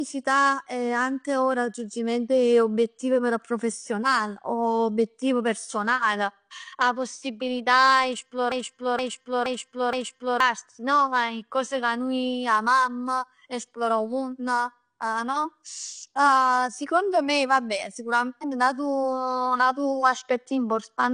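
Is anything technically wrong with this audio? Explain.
Yes, there are two faults. Throughout the speech the sound is dull and smeared, with a fizzy, warbling edge on sibilants and nothing above 9.8 kHz. This is likely AAC compression: AAC-LC at a rate that fits around 32 kbps drops the top band and coarsely quantises what remains.

From 8.52 to 10.40 s a 0.47 s fragment repeats exactly four times, back to back, like a stuck broken-record loop. The likely cause is a stalled player or stream resending its last buffered piece, so the audio meant for that span is lost.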